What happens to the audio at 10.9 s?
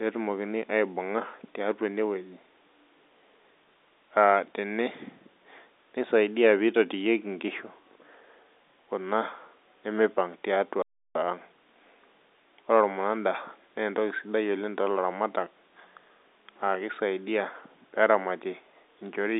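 A playback stall runs from 10.82 to 11.15 s: the speech breaks off mid-flow and the output falls silent for about 0.33 s before continuing. The gap points to the player being starved of data or its output thread being held up, likely a buffer running dry, so nothing reaches the output until it recovers. Through the pause the narrow telephone band of the G.711 line is simply absent, then returns unchanged.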